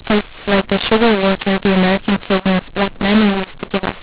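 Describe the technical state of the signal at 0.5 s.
At 0.5 s the speech suffers a mu-law and A-law mix-up that runs through the whole clip. The A-law telephone samples are being decoded as mu-law. Levels come out scrambled, so the speech sounds harsh and distorted. Quiet moments are lifted into audible noise.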